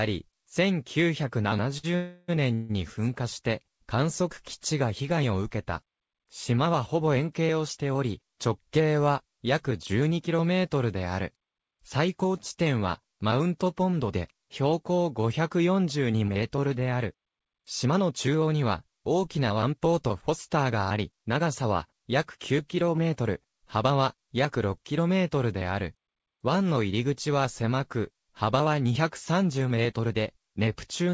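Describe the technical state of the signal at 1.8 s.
A late packet left the jitter buffer empty from 1.78 to 1.85 s, a short stall from a late packet. The receiver stretched the last sound by 55 ms and then resumed, losing nothing, but that sound hangs on with a slight buzz or dip, and everything after arrives 55 ms later.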